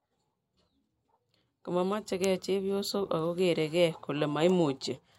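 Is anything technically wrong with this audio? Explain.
No, nothing technically wrong can be heard in this speech recording. There is no fault anywhere in the clip to point to.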